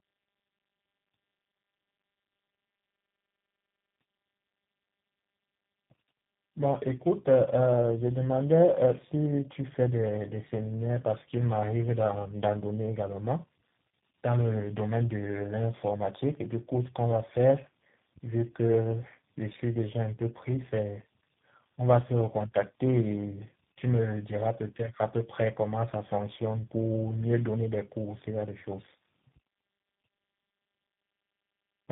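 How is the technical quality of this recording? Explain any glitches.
The quality is poor throughout, from start to finish, because of tandem speech coding. The call appears to have passed through about four speech codecs in a row, each re-encoding the previous one's already degraded output. The result is rough, muffled and warbly speech with nothing above about 3.8 kHz, which fits a chain ending in G.729A at 8 kbit/s. A single low-rate codec would sound thin, but it would not pile up this much smearing and gargle.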